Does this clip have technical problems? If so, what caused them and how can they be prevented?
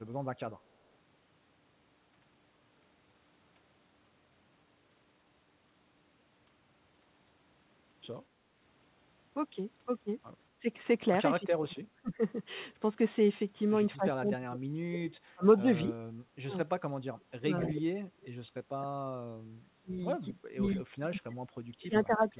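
Yes. Speech suppressed in double talk: the speech dips or partly vanishes at 10.59–10.68, 11.39–12.21, 13.95–15.65, 16.3–17.88 and from 18.75 to the end, by roughly 15 to 40 dB. It is likely the far end's echo canceller muting both talkers. Prevention: use a headset, or a canceller with better double-talk detection.

Echo leak: a faint delayed copy appears at 18.22 and 20.64, about 276 ms behind the original and roughly 20 to 30 dB quieter. This is likely loudspeaker echo slipping past cancellation. Unlike room reverb, it is a distinct late repeat, not a smeared tail. Prevention: use headphones or lower the loudspeaker volume.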